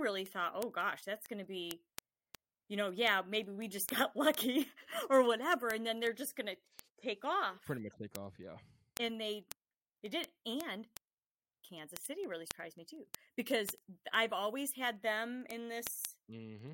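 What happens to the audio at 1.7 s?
At 1.7 s the speech is carrying word clock ticks, which run from 0.17 s to 16.68 s. A sharp tick lands about every tenth of a second, and the ticks vary in strength. The receiving device is running on its own clock rather than locking to the sender's, and the two clocks differ by roughly 300 parts per million. Each time they slip past each other, one sample is dropped or repeated.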